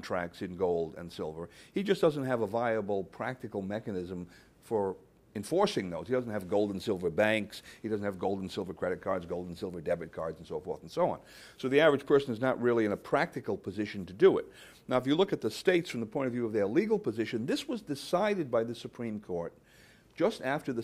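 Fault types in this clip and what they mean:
No faults are audible here.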